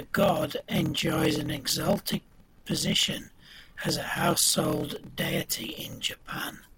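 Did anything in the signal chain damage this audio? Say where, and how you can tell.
Yes. A steady 38.3 Hz buzz runs under the speech throughout, and the speech drags at 0.889 times normal speed with its timbre unchanged. This is a block size mismatch (padded) in the driver or buffer: short blocks, fitting 1024 samples, are zero-filled to a longer read size, leaving a gap in each.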